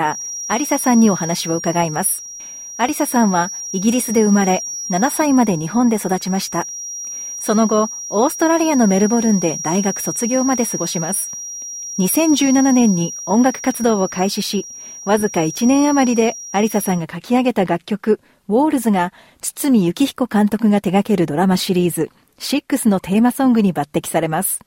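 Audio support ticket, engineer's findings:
Likely cause: speaker-to-mic loop gain sitting right at the feedback threshold, probably monitor or PA too close to or aimed at the mic. Symptom: feedback whistle, steady 5.7 kHz tone, 0.00–17.06 s, roughly 15 dB below program. Thin, sustained, slow level swell and fade, never runs away. Pull gain or notch 5.7 kHz.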